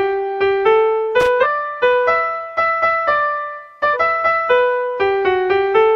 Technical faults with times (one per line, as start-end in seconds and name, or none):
1.20-1.27 loose connector crackle
1.40-1.46 damaged data in a compressed stream
3.90-3.97 damaged data in a compressed stream